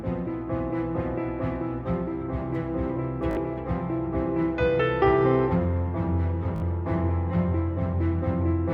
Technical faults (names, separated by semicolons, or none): Bluetooth stutter